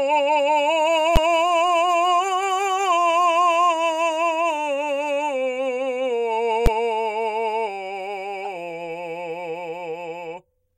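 At 1.16 s and again at 6.66 s the music is hit by a single hard bang, each lasting about 11.6 ms. These are invalid numbers at full scale: a calculation produced infinite or invalid values that became the largest positive or negative output value for one block, which fits a 512-sample block.

From 8.45 to 8.47 s a short blip appears in the music, peaking at about -15 dBFS. This is a corrupt frame decoded: damaged bits in what sounds like a single compressed frame were played anyway, so misread gains and codes scattered energy into the wrong frequencies.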